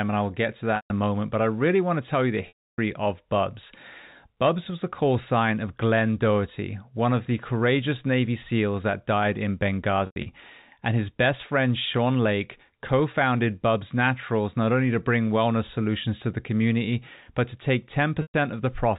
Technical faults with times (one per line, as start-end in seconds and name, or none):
0.76-0.90 packet loss with pitch repetition
2.48-2.78 packet loss with pitch repetition
10.06-10.26 packet loss with pitch repetition
18.22-18.34 packet loss with pitch repetition